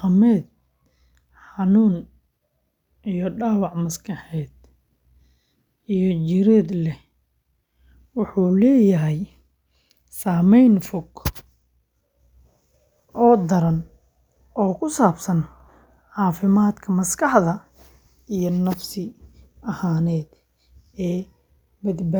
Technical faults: none

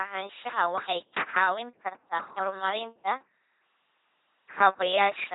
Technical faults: LPC-10 vocoder; word clock ticks

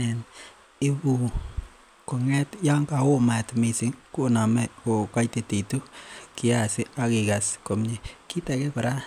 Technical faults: none

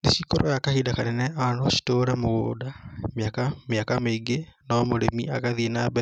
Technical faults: none

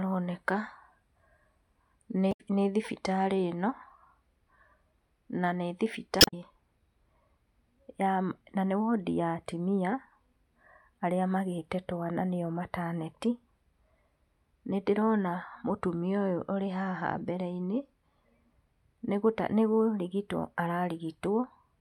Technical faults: damaged data in a compressed stream

